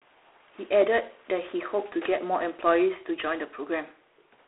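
A speech clip with a harsh, rasping hiss riding on the talker throughout, growing louder as the speech gets louder and dropping back in the gaps, over a thin telephone band of roughly 300 Hz to 3.5 kHz with nothing above 3.9 kHz. The cause is G.726 ADPCM coding: each sample is sent as a coarsely quantised difference from an adaptive prediction, and the plainly audible rasp fits the 24 kbit/s rate with only 3 bits a sample.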